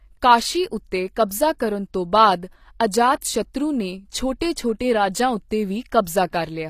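Throughout the speech the treble sounds synthetic: sibilants come out gritty and lispy, the upper range has a metallic sheen that does not quite match the body of the voice, and nothing sits above about 14.9 kHz. The damage is plainly audible. The likely cause is HE-AAC compression at a low bitrate, consistent with something near 24 kbps. The codec keeps only the lower spectrum and fakes the treble by copying lower bands upward, so harmonics misalign across that join.

At 3.21 s a brief wisp of hiss runs just ahead of a sharp onset, about 10 ms long, and the attack itself lands softened and smeared rather than crisp. This is pre-echo. The transform codec spread its quantisation noise across the whole block containing that attack, so noise scaled for the loud transient also filled the quiet instant before it, where nothing masks it.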